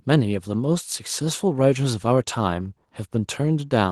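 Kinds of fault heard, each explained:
No kinds of fault are heard in this speech clip.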